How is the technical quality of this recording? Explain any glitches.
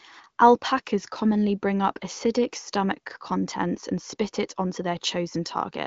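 No glitches or technical faults can be heard here.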